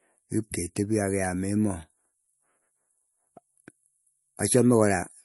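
Throughout the speech, nothing sounds above 11.3 kHz, and the plainly audible damage has a watery, swirly texture. The likely cause is MP3 compression at a low bitrate, around 48 kbps. Starved of bits, the encoder cut the treble and dropped weak detail frame by frame.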